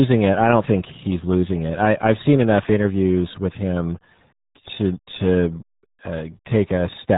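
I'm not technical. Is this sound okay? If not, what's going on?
No. Throughout, the speech sounds muffled and gargly. That's the RealAudio 14.4 codec, an old dial-up format that squeezed it hard and removed everything above 3.8 kHz.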